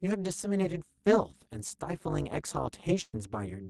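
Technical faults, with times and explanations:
Throughout: overlap-add ripple. The frames were stitched back together with an overlap that doesn't sum to a flat gain, so the level swings by about 60 dB every frame, around 200 times a second. That's the harsh, metallic buzz sitting on all the speech.
1.31–1.35 s: short concealed packet loss. About 20 ms of speech never arrived, and the decoder covered roughly 17 ms of that by extending the last sound before blending back in. You hear it as a quick smear or wobble, and a brief consonant may go missing.
3.01–3.15 s: burst of packet loss. Around 120 ms went missing at once. The receiver stretched the previous sound for about 116 ms while fading it, giving a held buzz or dying hiss, then roughly 20 ms of silence before the speech picks up further along.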